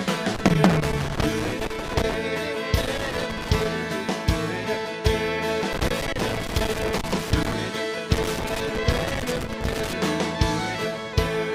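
Loose connector crackle breaks in four times: 0.34 to 2.14 s, 2.81 to 3.66 s, 5.73 to 7.53 s, and 8.13 to 9.93 s. A worn or dirty contact keeps making and breaking, chopping the signal into irregular scratchy bursts, with pops where DC on the line jumps. On the waveform, each burst shows jagged dropouts and sharp spikes; on a spectrogram, scattered broadband vertical streaks fill those stretches.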